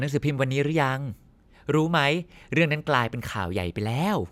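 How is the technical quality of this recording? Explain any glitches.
No technical faults are audible anywhere in this speech recording, so there are no glitches to explain.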